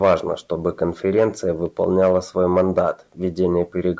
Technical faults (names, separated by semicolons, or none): none